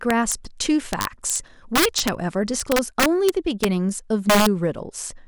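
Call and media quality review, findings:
Integer overflow. Violent cracks on loud speech at 0.11–0.32, 0.93–1.36, 1.76–2.09, 2.60–3.64 and 4.30–4.47 s. Peaks about 2–6 dB over full scale. An unclamped gain or mix stage wraps each peak to the opposite sign.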